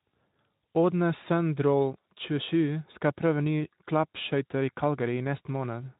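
No technical faults can be heard: the speech passes through a Speex codec at 15 kbps that leaves only a light coding texture, and nothing is present above about 3.8 kHz.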